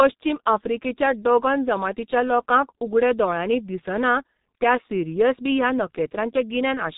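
A speech clip that's been through the G.723.1 codec from start to finish, and it's heavily damaged by it. Everything above about 3.8 kHz is simply missing, so it sounds muffled and boxy. The codec works in 30 ms frames and updates its vocal-tract model only that often, which gives a hoarse texture and smears the consonants together. The degree of damage points to a very low bitrate, around 6 kbit/s.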